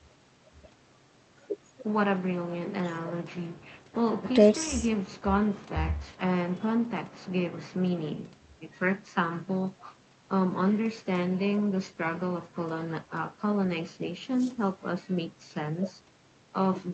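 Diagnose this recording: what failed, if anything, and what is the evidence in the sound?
Nothing failed; the speech comes through the call path intact, its top end stopping near 8 kHz as a wideband Opus link would leave it.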